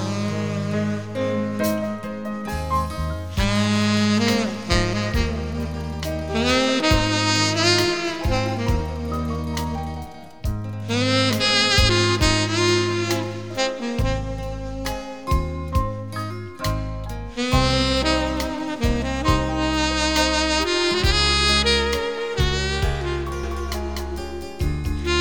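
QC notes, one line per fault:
23.43 s to end, doubled audio track: the sound abruptly gains a second, full-band copy trailing roughly 0.3 s behind and at about the same level, so every onset is heard twice. Unlike an echo or reverb, the copy does not decay, carries no room colour and arrives once rather than repeating. It switches in suddenly and runs to the close, likely from a second, slower capture path being mixed in.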